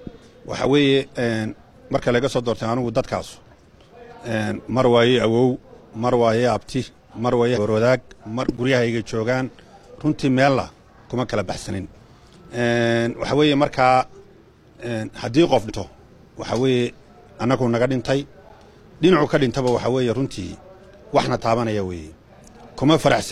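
The audio has two brief dropouts from compressed frames skipped, at 7.53–7.59 s and 15.65–15.70 s. At each point the sound jumps forward by about a tenth of a second, which fits roughly two codec frames of 46.4 ms that were missing or rejected by the decoder as damaged.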